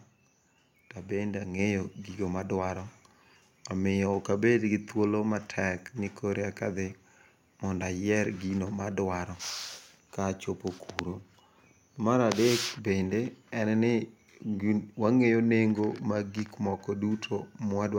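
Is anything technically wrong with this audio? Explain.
Yes. At 1.59 s the microphone volume is stepped up. The level jumps by about 4 dB in one step. Voice and background rise together. This points to the call software judging the microphone too quiet and raising the device's input volume.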